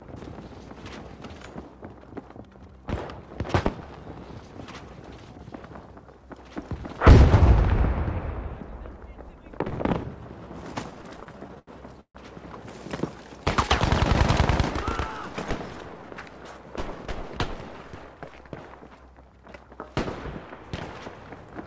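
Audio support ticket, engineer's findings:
Repeated stalls (stutter), 10.91–12.18 s. Jitter buffer underrunning repeatedly as packets arrive late or slower than playout; receiver extends the last sound, fading it on longer waits. 14 stalls, 356 ms filled in total, longest 143 ms, about 28% of the span concealed. Nothing lost, but the audio drags and stutters.

Jitter buffer speed-up, 15.73–16.34 s. Buffer holding more audio than its target; receiver trims short pitch-period chunks in succession, about a tenth of a second in all. Playback runs at 114% speed, same pitch, audibly hurried. Band-limited to 8 kHz through the call path, which fits a wideband codec such as G.722.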